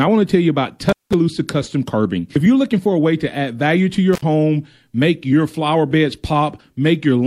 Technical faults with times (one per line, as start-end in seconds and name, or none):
0.89-1.14 intermittent contact
4.13-4.22 intermittent contact